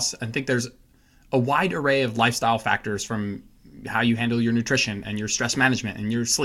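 No technical faults can be heard anywhere in the speech recording.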